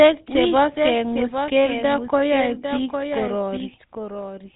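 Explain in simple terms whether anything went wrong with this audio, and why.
Two things went wrong, and both run through the whole clip.

There's a doubled audio track: the speech plays twice, with a second copy trailing about 0.7 seconds behind and a bit quieter, so every phrase gets a clean, dry echo. It's likely the sound was picked up again by a slower path, or an edit left two copies out of step.

The sound has also been through the GSM full-rate codec, the old phone standard. It rebuilds speech from a simple buzz-driven model, so the voice comes out clearly gravelly and buzzy, and everything above about 3.8 kHz is gone, giving that muffled phone-line feel.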